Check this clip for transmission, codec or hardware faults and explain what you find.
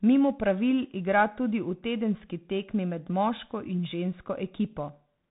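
One fault runs through the whole speech clip: Bluetooth CVSD headset codec damage, plainly audible from start to finish. Nothing above about 3.8 kHz survives, so the speech sounds narrow and muffled. CVSD codes each sample as a single up-or-down bit and adapts its step size as it goes. The sound fits a 64 kbps link. Fast, loud high sounds outrun the step and distort. S sounds turn scratchy. A grainy hiss sits beneath the speech.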